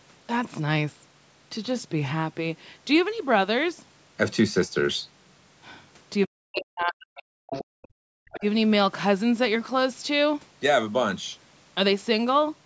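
Speech, run through a call's microphone chain, with content topping out around 8 kHz, and the trouble sits in a busy two seconds around the middle. From 6.26 to 7.28 s the talker's voice sinks, at worst by something like 40 dB, which sounds like speech suppressed in double talk: both ends were likely talking at once, and the echo canceller, unable to pull the talker apart from the loudspeaker echo, clamped down on everything. A much shorter version hits at 8.38 to 8.43 s, a shallow dip of roughly 15 dB lasting about 50 ms. Right after that first dip you get the other side's voice leaking through, likely loudspeaker echo the canceller didn't fully strip out. The first scrap at 7.49 to 7.65 s is fairly prominent, only around 10 dB under the talker. A faint one at 7.82 to 7.88 s sits far down, and another at 8.29 to 8.4 s is moderately audible, each just a brief fragment. Between those, from 7.65 to 8.1 s, the room sound drops out by about 40 dB for roughly 400 ms. 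That's background gated by the echo canceller: with the far end playing, it cranked the mic down hard, so the ambience vanishes and then comes back once the canceller releases.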